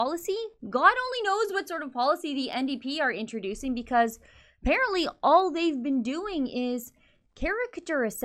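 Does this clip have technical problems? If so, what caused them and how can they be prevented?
Yes. Faint, regular ticks run through the speech from 0.48 s to 7.86 s. There are about twenty, roughly every 0.4 s. These clock slip clicks likely come from two unsynchronised clocks. Each tick is one dropped or repeated sample, which fits a clock mismatch of around 50 ppm. Locking both devices to one shared clock prevents them.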